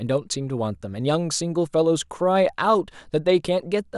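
Speech only, and nothing technically wrong turns up anywhere in the recording.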